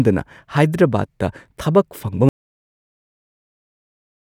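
A speech recording that suffers an audio dropout to silence at 2.29 s, lasting roughly 2.1 s through to the end of the clip. The sound stops abruptly mid-flow and the gap holds silence with no trace of room tone, which separates it from a natural pause or a noise gate closing, where some background would remain or taper off. The likely cause is a lost input, such as a disconnected device or failed link, while writing continued.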